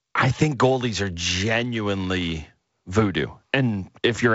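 No technical faults can be heard in this speech clip.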